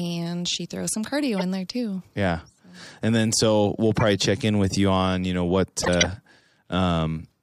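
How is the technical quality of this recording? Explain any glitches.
The recording is marred by three corrupt frames that were decoded anyway. Damaged bits in the compressed stream made the decoder apply wrong gains and misread spectral codes, putting energy at the wrong frequencies for each bad frame. At 1.38–1.43 s, after "she throws some", a couple of frames produce a short chirp. At 3.99–4.02 s, after "then so we'll", a single frame gives a brief blip. At 5.82–6.07 s, after "on you know what", a run of several frames produces a longer and much louder burst of noise.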